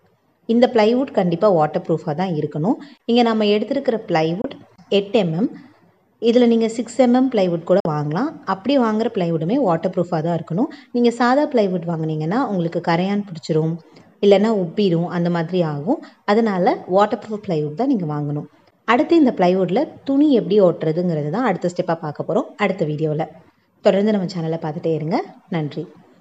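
At 4.42 s the sound cuts out briefly in a digital broadcast dropout. The receiver lost one frame, about 24 ms. It muted with a 3 ms fade, then picked up again. At 7.80 s a second hole follows. Two frames, about 48 ms, are gone. That material is lost.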